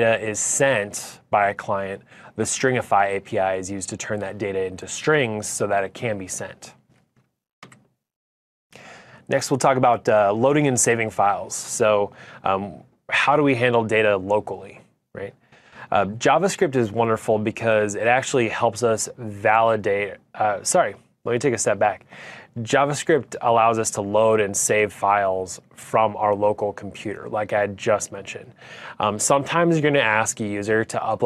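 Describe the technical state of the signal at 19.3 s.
At 19.3 s the signal is intact, with no dropout, clipping, glitch or other technical fault to be heard.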